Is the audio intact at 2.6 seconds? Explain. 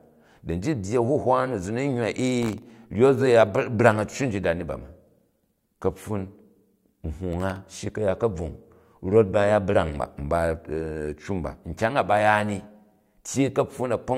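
No, 2.6 seconds falls inside a burst of processor overload crackle running from about 2.42 to 2.70 s. The processor keeps missing its deadlines on very short buffers, under a millisecond each, and each miss drops in a hard-edged gap of silence. Strung together, they tear through the speech as gritty crackle.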